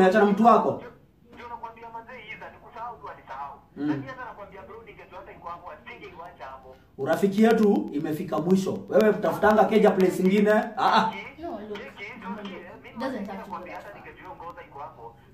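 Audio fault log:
6.13 to 15.25 s, periodic USB or driver dropouts: a tiny tick every 0.125 s, about seventy in all. Each time something stalls the bus or driver, roughly a tenth of a millisecond goes to silence, so you hear a steady clicking wherever there's signal.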